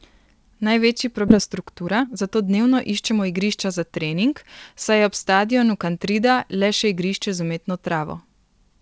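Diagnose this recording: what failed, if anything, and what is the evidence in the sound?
Skip ahead at the network and jitter-buffer stage: at 1.28 s the speech jumps forward with no gap, losing roughly 0.7 s of audio. The waveform splices the two sides directly, and the spectrogram shows an abrupt formant discontinuity.

Jitter buffer speed-up, also at the buffer stage: from 1.48 to 3.57 s the speech runs at 114% with unchanged pitch and sounds hurried. The buffer was trimming pitch periods, roughly 0.3 s in total. The spectrogram shows compressed syllable spacing with steady harmonic spacing, through a G.722 path empty above 8 kHz.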